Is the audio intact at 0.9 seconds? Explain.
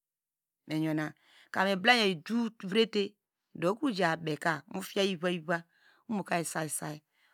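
Yes, the speech at 0.9 seconds plays through intact, with no fault to be heard at that moment.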